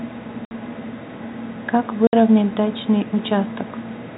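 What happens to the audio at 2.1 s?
At 2.07 to 2.13 s the speech drops out in a 60 ms gap of packet loss filled with silence, which fits two lost 30 ms packets. Unlike concealment, nothing repeats or fades across the hole. It is dead silence with hard edges.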